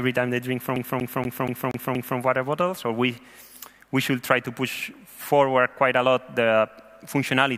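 From 0.76 s to 2.19 s the audio is caught in a CD stuck on one turn. A fixed flaw on the disc sends the laser back one track at the same point on each revolution, so the same 0.24 s segment plays six times in a row, with a brief mute at every jump back. The result is a fast, evenly spaced stutter whose period stays locked to that loop length until playback moves on.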